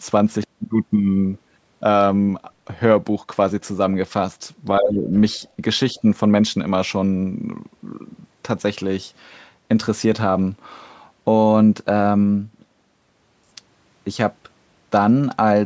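From 4.79 to 5.11 s the speech is pulled down hard, by around 20 dB at its deepest, in what is likely speech suppressed in double talk. The echo canceller, hearing both sides at once, attenuated everything. The waveform shows a sudden notch in the envelope, and the spectrogram shows energy thinning across all bands for about a third of a second.

From 5.93 to 6.04 s a milder dip of only a few decibels recurs, a brief sag in level rather than a gap.

Inside it, from 5.96 to 6.01 s, a faint scrap of the other side's voice leaking through sits far below the speech. It is likely residual loudspeaker echo the canceller missed, and appears as a barely visible smear of extra energy on the spectrogram.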